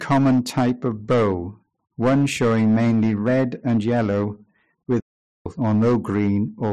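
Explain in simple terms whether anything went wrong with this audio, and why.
The speech suffers from hard clipping throughout: its loudest moments are pushed beyond what the system can carry, so the peaks are chopped flat. That gives a harsh crackle on those peaks, unlike steady background hiss. A playback stall occurs from 5.00 to 5.46 s, where the sound drops into complete silence for nearly half a second. That is much longer than a tiny click, and was likely caused by the player running out of data.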